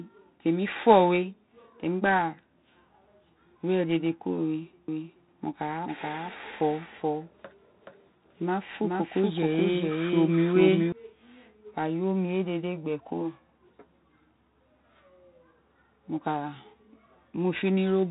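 Throughout, 4-bit ADPCM compression adds a gritty hiss that rises with every loud syllable and roughens sharp onsets. Nothing is present above 3.8 kHz, which fits a rate around 32 kbps.

From 4.88 to 10.92 s, a doubled audio track appears. A dry, full-band copy trails roughly 0.4 s behind, about 5 dB quieter, starting and stopping abruptly, likely from a second, slower capture path.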